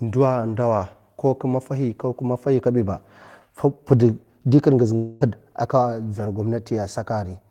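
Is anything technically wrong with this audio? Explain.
Yes. From 4.95 to 5.23 s, after "di karngiz", the sound turns to a fading buzz for about a quarter second before "a' ka dzaw" resumes, likely a long network dropout with the gap concealed.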